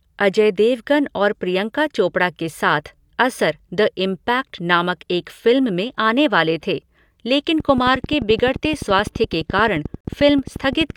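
From 7.60 s, right after "आने वाले थे लेकिन", a train of clicks runs to 10.91 s: around forty regular pops at 11.5 per second, peaking roughly 5 dB above the speech. It likely comes from electrical interference, and it shows as evenly spaced vertical lines on a spectrogram. At 10.01 s a digital broadcast dropout mutes the audio for about 43 ms, consistent with a single lost frame. This appears as a flat gap in the waveform and a blank column on the spectrogram.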